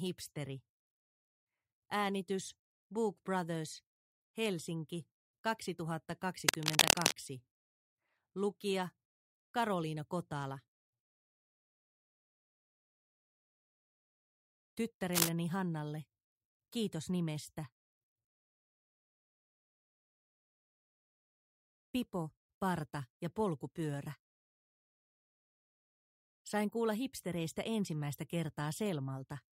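From 6.48 to 7.18 s and from 15.13 to 15.29 s, cable scratch noise sits about 5 dB above the sound. It is dense, uneven rustling rather than isolated clicks, likely from a worn connector or control being moved.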